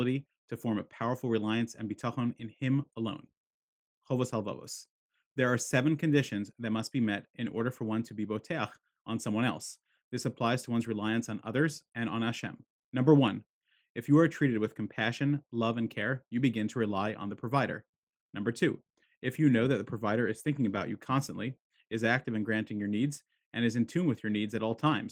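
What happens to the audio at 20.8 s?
From about 20.72 to 20.78 s, just after "the provider is thinking" and before "you constantly is active", the speech is briefly rough and noisy: a lost packet rebuilt from error correction. The lost audio was replaced by the low-bitrate copy carried in the following packet, and the roughly 40 ms patch fits two lost 20 ms packets. The waveform shows no gap. The spectrogram shows a short smeared, grainier strip with blurred harmonics.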